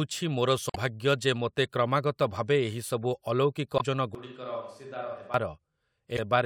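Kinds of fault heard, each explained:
Damaged data in a compressed stream: at 0.67–0.76 s just before "ଯେ ମୋତେ", at 3.77–3.81 s right after "ଭାବେ ଏହିସବୁ ଅଲୌକିକ", and at 6.15–6.19 s. Corrupted bytes make the decoder misread frames and lose sync, so each gap is heard as a brief glitch in the sound.
Switch to a distant microphone: from 4.15 s to 5.34 s the speech suddenly turns hollow and roomy, thinner in the low end and roughly 10 dB quieter, with room noise sitting only about 30 dB below it. This is likely a farther microphone covering for the close one.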